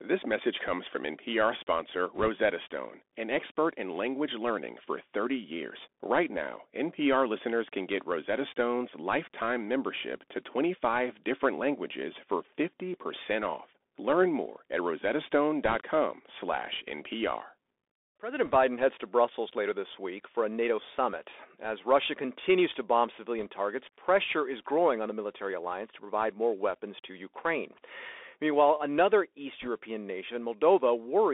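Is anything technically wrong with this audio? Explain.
Yes, there are two problems.

The whole clip goes through a Bluetooth CVSD headset codec. The sound is confined to about 250 Hz to 3.6 kHz. The coder tracks the waveform one up-or-down step at a time, so loud high-frequency sounds outrun it and distort. S sounds turn scratchy over a constant granular hiss. That hiss and the scratchiness separate it from a plain band-limited line.

There are also bit errors on a Bluetooth voice link at 2.15–2.29 s, 15.65–15.76 s, 18.46–18.56 s (just before "heads to"), 23.40–23.47 s (between "continues to bomb" and "targets pressure is growing") and 29.62–29.68 s. The error rate is around one or two percent. Each flipped bit nudges the signal only slightly, so these bursts are brief rushing crackles, not the sharp clicks or silent gaps of packet loss.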